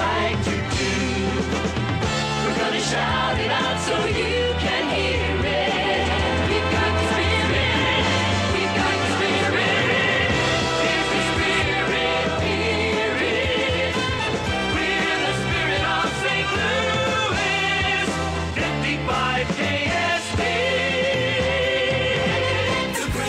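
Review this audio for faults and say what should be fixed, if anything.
From 5.90 s to 11.62 s the audio carries a doubled audio track: a second full-band copy of the same material runs roughly 300 ms behind the original, about 5 dB quieter. It has no decay or room colouring, so it reads as a clean, fixed-offset repeat rather than an echo, and it switches on and off abruptly at those two points. The likely cause is the signal being captured a second time through a slower path, or an edit leaving two misaligned copies stacked. To prevent it, route each source through a single capture path and check that overlapping regions in the edit are removed before mixdown.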